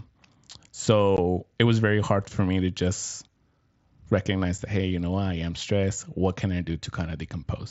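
At 1.17 s, just before "it was very hard", the speech drops out for about 15 ms, and again at 4.58 s, just before "that hey you know", for about 7.5 ms. This is unconcealed Bluetooth headset packet loss on the mSBC wideband link: headset-to-phone packets never arrived and silence or an idle pattern was left in their place. The gaps are short holes with abrupt edges. Concealed loss would be smoothed over with repeated or faded sound.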